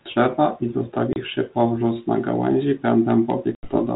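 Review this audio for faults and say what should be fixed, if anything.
Two hard-edged silent holes cut into the speech, the first at 1.13 to 1.18 s, just before "powróz na gałęzi", and a longer one at 3.55 to 3.70 s. Each ends with the speech coming back slightly distorted. This is packet loss on an ADPCM call: a few packets (30 ms) and then several (80 ms) went missing and were filled with silence, leaving the 32 kbit/s G.726 decoder's predictor and step size out of step with the sender's until they re-converge. Adding jitter buffering with loss concealment, or resetting decoder state cleanly after a gap, would prevent it.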